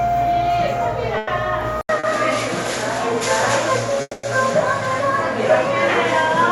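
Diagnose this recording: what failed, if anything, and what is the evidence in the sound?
Call audio freeze, network stage, at 1.17–1.29 s and 4.01–4.25 s: the last sound is extended as a fading buzz for about 100 ms and then about 220 ms, the second ending in 20 ms of silence. Nothing is lost, which points to a likely jitter-buffer underrun from held-up packets.

Input switched to a poorer device, driver stage, at 1.81 s: after an 80 ms silence, nothing remains above 11.4 kHz, the level shifts by roughly 5 dB, and new noise sits roughly 35 dB down. This is likely a change of capture device.

Short stall from a late packet, network stage, at 1.99–2.05 s: the sound is held for 40 ms with a slight buzz while the receiver waits, then resumes without loss.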